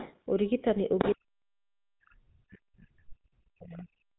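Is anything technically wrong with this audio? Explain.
Yes. The speech runs through the GSM full-rate codec for its whole length, nothing reaches above 3.9 kHz, and the damage is plainly audible. The codec rebuilds the voice from a vocal-tract model and sparse pulse excitation, giving a buzzy, gravelly roughness consistent with a 13 kbps GSM stream.

Other side's voice leaking through appears from 0.00 to 0.19 s, sitting roughly 15 dB below the speech, and again from 0.98 to 1.14 s at about the same level as the speech. Likely cause: loudspeaker playback reaching the microphone and escaping the echo canceller.

Speech suppressed in double talk begins at 1.14 s and continues to the end, affecting about three seconds. The speech dips and drops out in pieces, at worst by around 40 dB, likely because the echo canceller mistook overlapping talk for echo and attenuated everything.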